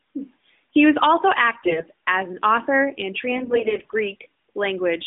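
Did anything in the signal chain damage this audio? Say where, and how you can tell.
Yes, at the network stage: AMR bit errors on the mobile link, over a narrowband path that, with nothing heard outside about 200 Hz to 3.7 kHz, fits AMR-NB at 12.2 kbps. From 1.60 to 1.84 s, and again from 3.32 to 3.95 s, the speech keeps its pitch and level but turns hoarse and gargly. The first burst is harsher, with a heavy share of bits flipped; the second is milder. Corrupted excitation pulses and gain and spectral values are being decoded as valid.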